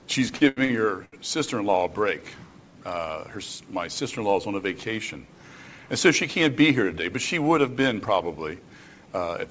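Repeated stalls (stutter) run from 0.36 to 1.15 s: four times the playback halts and the receiver stretches the last sound to cover it, with the longest hold lasting about 82 ms and roughly 244 ms filled in total. Packets were reaching the jitter buffer late, so it kept running dry. Nothing is lost, but nearly a third of that stretch is concealment, so the audio drags and hiccups before catching up. It passes through a call path with nothing above 8 kHz, which points to a G.722 codec.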